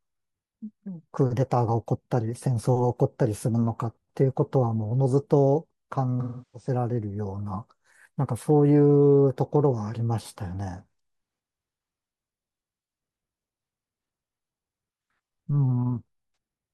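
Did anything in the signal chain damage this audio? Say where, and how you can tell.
Yes. AAC frame loss with concealment hits the speech at the codec stage, from 6.20 to 6.69 s and again at 16.32 s. The decoder rebuilds missing frames from the last good spectrum, so about 0.34 s, roughly eight frames' worth, is filled in by concealment, then a single-frame gap follows.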